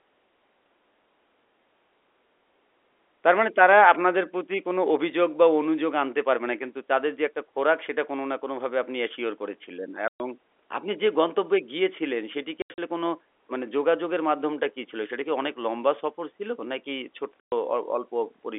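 Speech over a telephone-band line, where the G.711 coding itself passes cleanly, with three stretches of packet loss filled with silence. Holes of about 120 ms land at 10.08–10.2 s, 12.62–12.78 s (broken into several gaps across 160 ms, the longest 80 ms) and 17.41–17.52 s. Each drops to silence with hard edges rather than fading or being smoothed over, which separates it from a noise gate or concealed loss. Gap lengths fit 20 ms packets.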